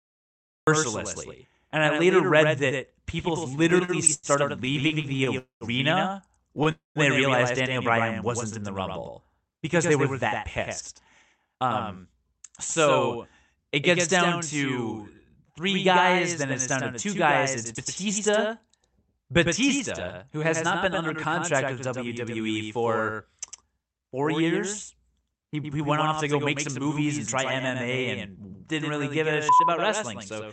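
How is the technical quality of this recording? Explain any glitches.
The quality is compromised by several call-transmission glitches, heard over the Opus call codec's usual coding noise and its high-frequency cut-off at 8 kHz.

Doubled audio track, throughout: a dry second copy of the speech trails about a tenth of a second behind at roughly 5 dB lower, likely from a duplicated capture or misaligned edit.

Cut-off start, at 0.67 s: the speech bursts in from digital silence mid-sound with no attack, because recording or streaming began late.

Repeated stalls (stutter), 3.55 to 6.68 s, ending before "they realized": the speech drags and stutters through 17 brief stretches, the longest 97 ms, as late packets repeatedly emptied the buffer and the receiver extended sound.

Call audio freeze, 5.38 to 5.64 s and 6.71 to 6.98 s: the last sound holds as a fading buzz, then silence of 130 ms and 160 ms, before speech resumes intact. 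Delayed packets that drained the jitter buffer are the likely cause.

Jitter buffer speed-up, 10.39 to 22.40 s (about 4% faster, roughly 0.4 s trimmed), 25.80 to 26.96 s between "he he" and "and try" (5%), and 29.28 to 30.44 s after "and didn't really give" (4%): speech runs faster at unchanged pitch, sounding hurried in the 5% stretch, as the receiver cut pitch-period slices to shed excess buffered delay.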